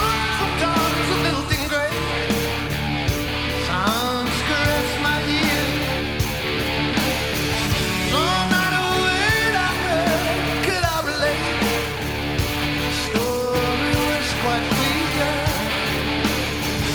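Nothing in the audio marks a technical fault. There is no moment that needs a timestamp or closer listening.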